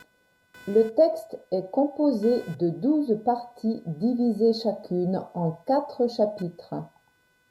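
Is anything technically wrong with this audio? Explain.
Yes. Throughout the speech, a faint buzzing, chirping texture sits underneath, pulsing at around 500 Hz and roughly 35 dB below the speech. This is computer activity noise: processor, graphics or mouse load shifts the audio circuit's shared ground, so the buzz follows the machine, not the sound.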